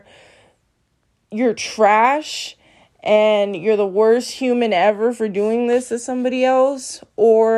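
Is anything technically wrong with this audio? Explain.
No, the speech signal comes through without any audible technical fault.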